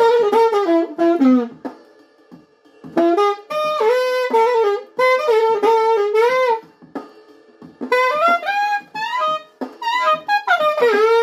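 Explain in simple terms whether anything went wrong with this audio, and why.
Listening to the whole recording, nothing went wrong that I could hear, so there's no problem to explain.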